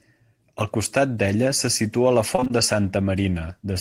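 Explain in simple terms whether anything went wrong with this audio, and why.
Yes. From 2.35 to 2.51 s, repeated packet loss (robotic sound): four short dropouts, each patched by repeating the last sound, so half that stretch sounds choppy and robotic rather than silent.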